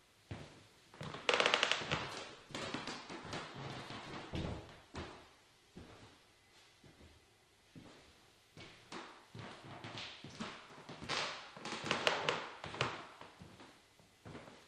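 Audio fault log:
1.98–7.98 s: adaptive stream at a lower bitrate. Codec artefacts rise abruptly without a gap, which fits a switch from 64 to 12 kbit/s Opus.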